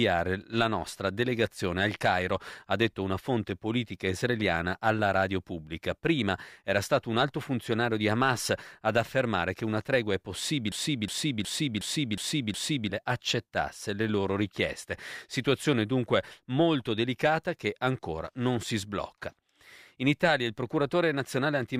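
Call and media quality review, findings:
Broken-record loop, 10.72–12.90 s: 0.36 s speech fragment repeats six times back to back; likely player or stream stall. Spectrogram shows identical repeating blocks; original audio lost.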